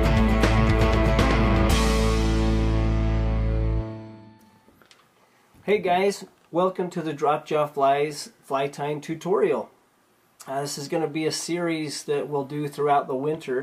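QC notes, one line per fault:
No faults heard anywhere in this clip.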